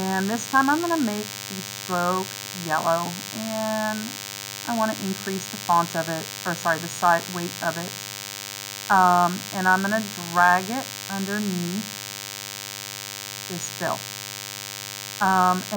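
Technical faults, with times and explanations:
Throughout, DECT cordless phone buzz: a thin, steady buzz sits under the sound for the whole clip, only moderately quieter than the wanted audio. A nearby DECT handset or base transmits a short radio burst every 10 ms, and the audio circuitry rectifies each burst into a small pulse. That 100 Hz pulse train is rich in harmonics, so it comes across as a hard-edged, raspy buzz rather than a smooth hum.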